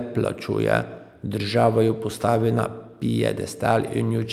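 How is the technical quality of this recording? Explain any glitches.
No glitches can be heard anywhere in this speech recording. There is nothing in it that needs explaining.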